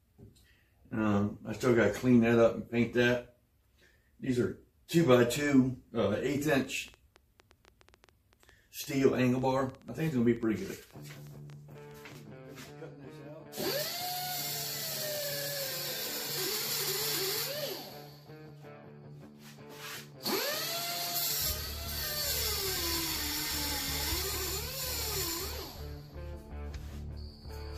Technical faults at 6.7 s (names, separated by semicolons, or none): train of clicks